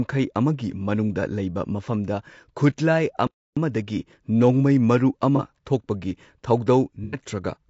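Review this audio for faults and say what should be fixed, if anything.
Throughout the speech the voice sounds rough and grainy, with noise filling the gaps between harmonics and a thin, synthetic top band, most likely low-delay AAC compression (AAC-ELD) at a low rate, around 32 kbps. Its short frames resolve pitch harmonics poorly, and unlike a lowpass that simply dulls the sound, this adds texture. Raising the bitrate or switching to a longer-frame codec would prevent it.

From 3.27 to 3.57 s the sound stops dead for about 0.3 s and then continues, which points to a playback stall, likely the player running short of data or its thread being blocked. Unlike concealment, the gap is clean silence with no smearing or fade. Larger playback buffering and an unblocked audio thread would prevent it.

At 5.36 to 5.41 s a short smeared, noisy patch of about 30 ms appears, fitting one lost frame. 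At 7.04 to 7.19 s a 90 ms stretch is patched over, fitting three. This is AAC frame loss with concealment: the decoder rebuilds from the last good spectrum, so the sound smears rather than dropping cleanly. Forward error correction or retransmission would prevent it.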